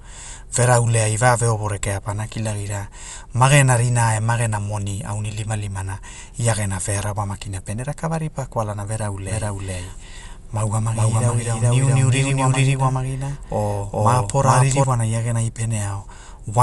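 From the start the speech sounds dull and rough, with nothing above 11.5 kHz, plainly audible damage that's likely Dolby Digital compression at a low bitrate around 64 kbps. Then from 9.28 to 14.84 s there's a doubled audio track: an equally loud copy trailing roughly 400 ms behind, abruptly appearing and vanishing, likely from a second capture path.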